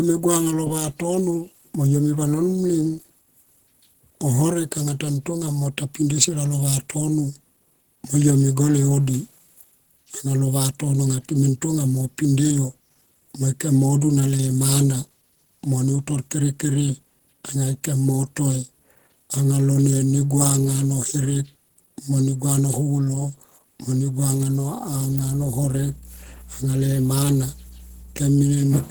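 From the start to the end, the speech is coarse and grainy. The voice sounds hoarse. Voiced sounds carry a rough, noisy texture. The top end stays open, with content reaching to about 20.3 kHz. The likely cause is Opus compression in its hybrid mode. That mode codes the lower band with the speech coder and adds the upper band with the music coder. With too few bits, the gaps get filled with noise. The damage is plainly audible, which fits a low bitrate near 16 kbps.

From 25.08 to 28.60 s, a steady low tone sits under the speech. This is mains hum at 60 Hz. Power-line current has leaked into the signal, through a ground loop or a nearby transformer. The hum is fairly strong, roughly 20 dB below the speech. It holds a constant pitch throughout.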